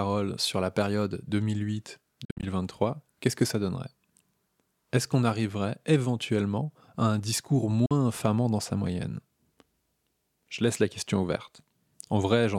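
Bluetooth dropout at 2.25–2.43 s and 7.86–7.91 s: the speech cuts to silence, with abrupt edges or a fade of a few milliseconds. First come scattered gaps totalling about 130 ms, the longest 58 ms. Then about 44 ms is lost between "éventuellement à un discours" and "infamant dans sa moyenne". The likely cause is late wireless packets being discarded.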